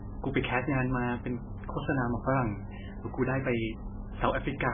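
Right from the start and all the way through, the speech carries heavy MP3 compression damage, likely from a very low bitrate somewhere around 9 kbps. Nothing gets through above 3.5 kHz, so the top end is just gone and everything sounds dull and boxed in. With so few bits, the encoder keeps dropping quiet frequency detail frame by frame, and that gives the audio a watery, swirly texture, with sibilants going chirpy and metallic and consonant onsets smeared.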